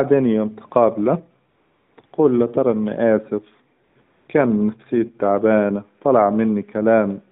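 AMR comfort noise replaces the real background at 1.50 to 1.98 s, after "يوم تقابله" and before "تقول له طيب إني". It returns at 2.02 to 2.04 s and 2.06 to 2.12 s, then at 3.84 to 3.96 s and 4.02 to 4.28 s, before "كان نفسيتي تعبانه طلع". The phone judged these pauses silent and stopped sending speech frames. The receiver filled the gaps with smooth synthetic noise, which switches in and out.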